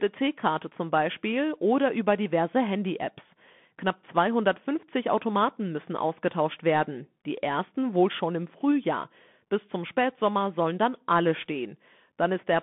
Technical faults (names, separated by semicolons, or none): Bluetooth CVSD headset codec